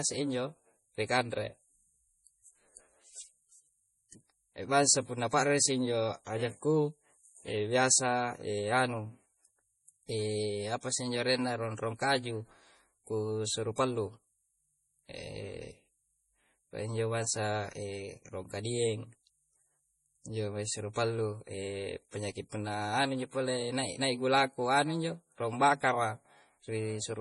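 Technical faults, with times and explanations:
Throughout, low-bitrate audio saved at a high bitrate: the speech sounds dull and band-limited, with nothing above about 11.3 kHz, and carries the swirly, smeared texture of heavy compression. This is likely an MP3 made at a very low rate, with a limit and artefacts that fit roughly 32 kbit/s, later re-encoded at a generous rate such as 192 kbit/s. The second pass kept the damage intact and could not bring back the discarded detail.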